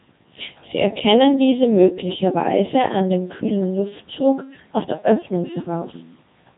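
Throughout, Codec 2 vocoder damage is heavy: speech is rebuilt from sine waves, sounding robotic and buzzy, which fits roughly 2.4 kbit/s. The spectrogram shows nothing above 3.8 kHz.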